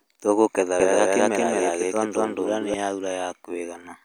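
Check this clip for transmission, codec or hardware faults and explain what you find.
One fault is present: a doubled audio track from 0.80 s to 2.74 s. Across that stretch, a second full-band copy of the speech runs roughly a fifth of a second behind the first, at about the same loudness, so every syllable is heard twice. The copy likely comes from the same signal being captured again through a slower path. Unlike acoustic echo or reverb, the trailing copy has no decay or room colour, and it cuts in and out abruptly at both ends.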